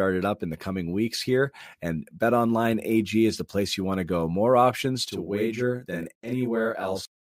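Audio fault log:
5.09–7.27 s: channel delay (doubling); one channel runs 40 ms late and sums to mono, giving an equal-level slapback copy behind the speech.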